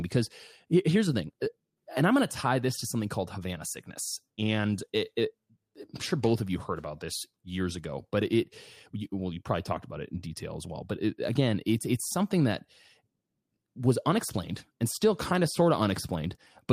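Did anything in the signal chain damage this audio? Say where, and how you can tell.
Yes. The damage sits at the network receive side, in the jitter buffer, as clock drift between sender and receiver. The sender's clock runs roughly 5 percent fast, so the buffer keeps overfilling, and the speech carries small, unevenly spaced timing hiccups from start to finish.

The receiver answers with repeated timing corrections, from 0.03 s to 16.72 s. To stop the overflowing buffer, it keeps cutting out short slices, all in the same direction. The speech plays at about 105 percent of its proper pace, with a slightly unsteady tempo.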